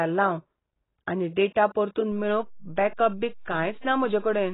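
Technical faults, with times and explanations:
Throughout: AAC compression. The speech is dull and smeared, and nothing is heard above 3.9 kHz. The likely cause is AAC-LC coding at a very low bitrate, around 16 kbps by the sound of it. At that rate the encoder cannot afford the upper band, so it drops it. The remaining spectrum is quantised coarsely against a hearing model. Detail is lost, and sibilants and held sounds take on a warbling, fizzy texture.
2.12 s: DC step. The waveform's zero line jumps at this point and stays offset to the end of the clip. The sudden shift is heard as a single low thump or click. The offset itself carries no tone, so the speech continues unchanged after the jump. Such a step comes from a converter recalibrating or an input with a standing offset being switched in.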